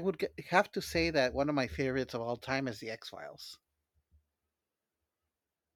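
No technical faults can be heard anywhere in the speech recording; the signal stays steady and intact throughout.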